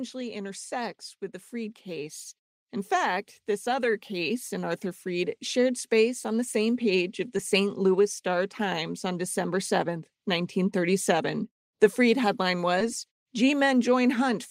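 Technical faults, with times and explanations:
1.5 to 5.48 s, automatic gain rising: The automatic gain control judged the incoming level too low and raised its gain step by step over roughly four seconds, by about 9 dB in total. Because the control scales everything it receives, the speech and the background noise beneath it swell together. The result is a slow, steady lift in loudness and in the noise floor, not a sudden jump.
7.37 to 7.39 s, short concealed packet loss: A packet carrying 10 ms of the call arrived too late or not at all, so the decoder had nothing to play for that moment. The receiver covered the gap with 10 ms of synthesised continuation drawn from the sound just before it, then blended back into the real signal. This leaves a tiny smear or wobble in the speech, and a brief consonant sound there can be lost.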